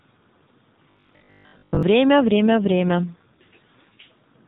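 Robotic sound from repeated short buffers runs from 0.91 to 1.83 s. The speech collapses into a rigid, metallic buzz at 50 Hz that still loosely tracks the syllables. The likely cause is audio arriving too seldom, so the playback side loops the last chunk, about 20 ms long, which fits that 50 Hz pitch. Roughly two thirds or more of the stretch is repeated material while the real audio in between is lost.

An AMR rate drop follows from 2.21 to 4.08 s, with the AMR-NB narrowband codec stepping down from 12.2 to 5.9 kbps. The bandwidth stays capped at 4 kHz and nothing goes silent, but the speech turns rougher and more synthetic, with a buzzy, artificial edge. With fewer bits per 20 ms frame, the codec models the vocal tract and its pulse excitation more coarsely, and the quality stays degraded until the rate climbs back.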